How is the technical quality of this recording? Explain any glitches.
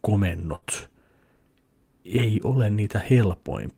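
There is one glitch, a burst of packet loss from 0.55 to 0.65 s in this speech. Several packets failed to arrive in time, so the receiver extended and faded the last sound for about 62 ms, then resumed with roughly 60 ms of speech skipped.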